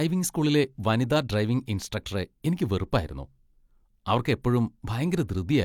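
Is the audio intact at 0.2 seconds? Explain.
Yes, the audio is intact at 0.2 seconds, with no fault present at that moment.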